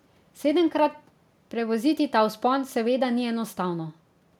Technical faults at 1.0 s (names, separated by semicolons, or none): none